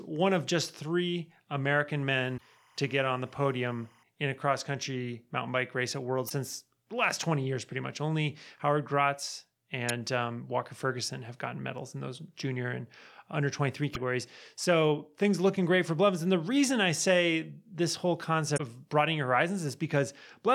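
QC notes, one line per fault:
2.14–4.03 s, timecode bleed: a steady chirping warble sits around 35 dB below the speech. Linear timecode at 25 frames per second is leaking in from an adjacent track or cable. Its square wave flips between pitches near 1 and 2 kHz, producing that buzzy two-tone chatter.
2.34–2.41 s, 6.26–6.32 s, 9.89 s, 13.91–13.96 s, 18.54–18.61 s, damaged data in a compressed stream: short chirps or squawks break through the speech, each lasting up to about 70 ms. Corrupted bytes make the decoder misread frames and lose sync, and it briefly outputs garbage while hunting for the next valid frame header.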